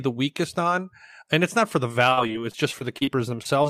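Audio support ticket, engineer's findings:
Repeated packet loss (robotic sound), 2.09 to 3.67 s. Choppy texture. About a dozen short holes, longest 39 ms, covering about 15% of the span. Network path. Missing packets patched by extending the preceding sound, which leaves the speech robotic.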